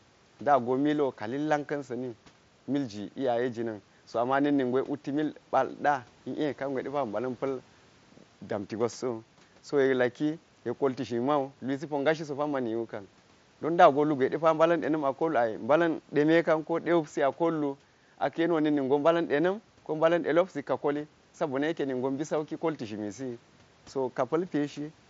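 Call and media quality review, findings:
No faults found in this speech recording. Room noise sits about 36 to 40 dB below the speech, and the mSBC headset path holds speech to 8 kHz with a light grain on louder sounds.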